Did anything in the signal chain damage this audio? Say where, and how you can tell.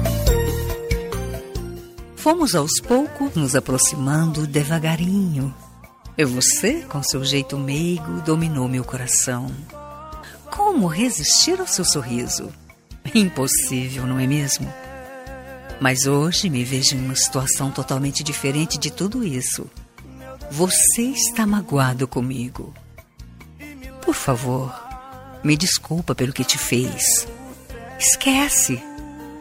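No, nothing along the chain from capture to playback has left an audible mark on this signal, which holds steady level, continuity and tonal balance throughout.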